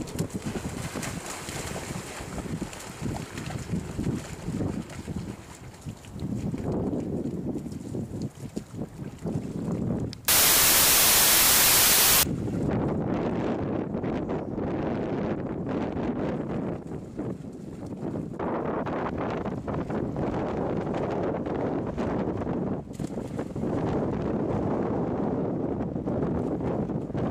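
A wrong sample width runs from 10.28 to 12.23 s. Across that stretch, audio stored as packed 24-bit integers is read back as 16-bit integers, so many values are built from two bytes that straddle the true 3-byte sample boundaries. Only some of those values carry the upper bits of the real waveform, leaving the original buried under loud noise. The same misreading plays it at 0.667 times speed, lowering the pitch to match.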